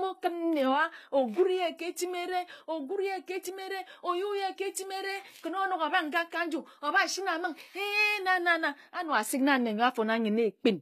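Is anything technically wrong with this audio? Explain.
Yes. Throughout the speech, the s sounds come out gritty and lispy, and the treble, though reaching up to about 21.3 kHz, sounds synthetic. This is likely HE-AAC compression, consistent with roughly 24 kbps, rebuilding the upper band from copied lower bands, so harmonics there don't align.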